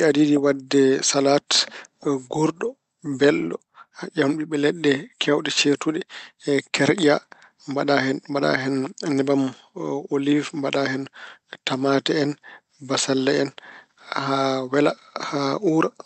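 Nothing goes wrong in this speech clip; it has simply travelled over a WebRTC call path, and the Opus coding there keeps the sound within a band that tops out around 8 kHz.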